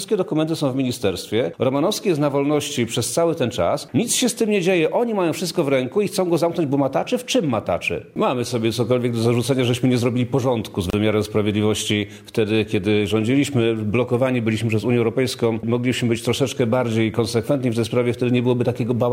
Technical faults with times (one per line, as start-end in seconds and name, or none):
10.90-10.93 gap at a join of encoded pieces